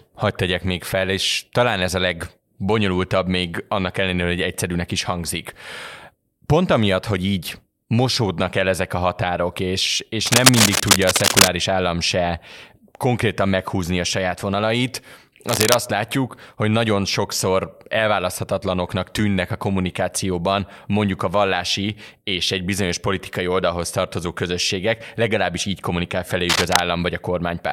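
At 10.27 s a burst of cable scratch noise breaks in and runs to 11.48 s, a dense, uneven rustle sitting a little louder than the speech. It comes back from 15.47 to 15.84 s and again from 26.49 to 26.81 s, both times at roughly the speech's own level. The likely cause is a worn lead or connector being shifted, so its contact resistance jumps around and sprays crackle into the signal.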